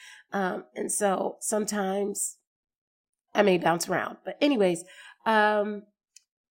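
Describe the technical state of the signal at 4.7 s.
At 4.7 s the speech signal is intact, with no dropout, clipping, glitch or other fault at that point.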